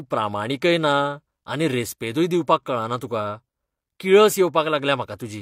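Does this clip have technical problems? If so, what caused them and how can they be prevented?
No, there are no technical problems to report here, since the signal holds steady and intact from its first moment to its last with nothing that calls for a cause or a fix.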